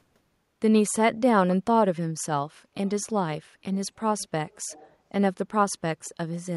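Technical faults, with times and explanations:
2.86–2.90, 3.73–3.77, 4.19–4.28, 4.49–4.95, 6.05–6.09 s: echo leak, speech returning 239 ms late, about 30–40 dB down, likely a loudspeaker's uncancelled echo; faint delayed harmonic traces on a spectrogram.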